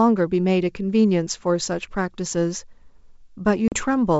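A short speech recording carried over G.722 wideband telephone coding, where the sound reaches up to 7 kHz with faint upper-band hiss, consistent with the full 64 kbit/s mode. At 3.68 s there is packet loss on the ADPCM call. About 40 ms of audio, a few packets' worth, drops to hard-edged silence. Speech resumes at 3.75 s slightly distorted. The decoder's adaptive predictor and step size have drifted from the sender's and need some tens of milliseconds to resynchronise.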